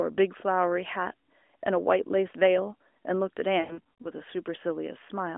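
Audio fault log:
0.38–0.41 s, lost AMR speech frames: a single 20 ms gap that the decoder fills by repeating the last good frame at lower gain, heard as a brief dip.
3.60–4.10 s, lost AMR speech frames: about 240 ms missing across 0.44 s, longest run 100 ms. The sound smears and fades, then returns rough through the narrowband line.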